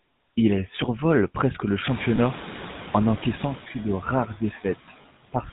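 Speech recorded over rising room noise, carried by the GSM full-rate codec. Its buzzy, gravelly roughness is plainly audible throughout. The vocal tract is modelled and excited by regular pulses, so detail is lost. Nothing passes above 4 kHz, which fits a 13 kbps GSM full-rate link.

Noise suppressor artifacts are also present throughout. Steady noise is cut by about 13 dB, band by band, frame by frame. The leftover noise sinks between phrases and rises under the speech.

Around 2 s, the room noise jumps by about 21 dB. The noise suppressor is caught catching up from 1.89 to 3.6 s. At first the noise comes through with only about 7 dB of reduction. It then sinks over 1.71 s as the noise estimate adapts.

Lost GSM frames occur from 2.16 to 2.19 s and from 5.02 to 5.05 s. Each is a 20 ms gap, which points to a single lost frame. The last good frame is repeated, so the sound briefly holds with a rough, metallic ring.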